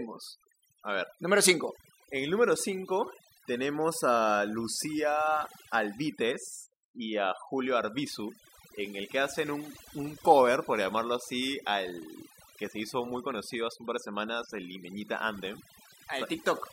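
Throughout the speech, the background drops and breaks up into twinkling specks: overdone noise removal, with a noise reducer set too strong.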